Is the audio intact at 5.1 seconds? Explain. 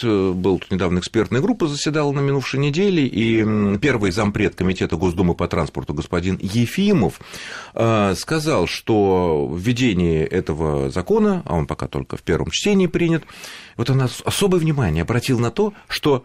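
No. At 5.1 seconds the speech is inside a stretch from 3.22 to 5.22 s where an adaptive stream at a lower bitrate took over. When the connection slowed, the player switched to a leaner encoding, which fits a step down from about 64 to 16 kbit/s Opus. Codec artefacts rise. Unlike a dropout, there is no gap. The quality changes abruptly at both edges.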